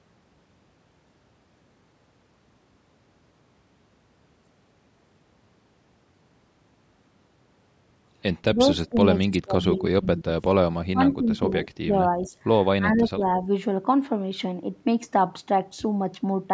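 Likely speech suppressed in double talk: the echo canceller ducks the talker during overlap, so speech dips or drops out at 8.49–9.07, 9.23–10.4, 10.7–11.67, 11.85–11.95, 12.17–12.32 and 12.76–13.21 s, deepest around 25 to 30 dB.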